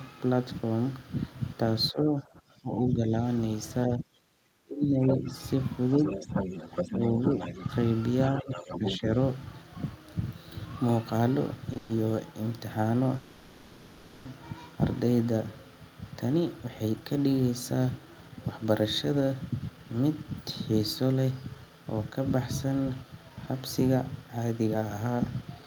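From 1.92 to 3.12 s and 3.87 to 5.32 s the speech dips by up to about 20 and 25 dB. This is speech suppressed in double talk, likely an echo canceller turning everything down while both sides spoke. Shallower dips of about 5 dB follow at 6.16 to 6.46 s and 6.85 to 7.57 s, and a deeper one of about 15 dB at 8.4 to 9.04 s.

Overlapping these, a second voice comes through at 5.07 to 5.32 s and 8.25 to 8.99 s, about 5 dB below the speech, and at 5.97 to 7.65 s, about 10 dB below. This is the other side's voice leaking through, likely loudspeaker echo the canceller left in the microphone signal.

At 11.73 s a sound is held about 20 ms too long, a short stall from a late packet that emptied the jitter buffer.

Straight after, from 11.77 to 11.91 s, and again for about 1.1 s from 13.16 to 14.27 s, the sound turns into a fading continuation of the last sound. This is a call audio freeze, likely held-up packets leaving the receiver to fill the wait before resuming where it stopped.

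From 16.33 s to the end at 25.63 s the speech sounds hurried, running about 11% fast at unchanged pitch. This is jitter buffer speed-up, with roughly a second of short pitch-period slices trimmed to cut built-up delay.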